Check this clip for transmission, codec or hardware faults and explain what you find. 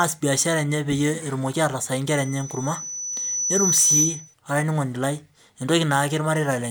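One hardware fault stands out: loudspeaker feedback squeal from 2.07 to 4.34 s. The microphone is picking up its own loudspeaker, and around 6 kHz the loop gain exceeds one, so a pure tone swells over roughly two seconds until it sits a few dB above the speech. On a spectrogram it shows as a thin, brightening horizontal line at 6 kHz.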